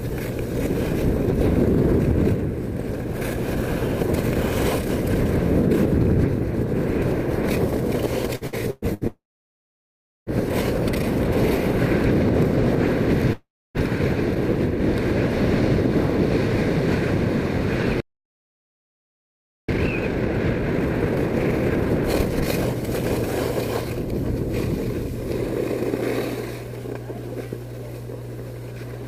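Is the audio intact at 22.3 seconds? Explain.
No, not quite. You're inside a time-compressed catch-up that runs from 19.69 to 22.69 s: after a stall the player trims its backlog by snipping out small slices and cross-fading the joins, so the sound rushes along at 1.5x speed with normal pitch. There's also mains hum the whole way through, a steady 60 Hz drone with a few low harmonics, from power-line pickup like a ground loop, and it's fairly prominent, around 10 dB under the signal.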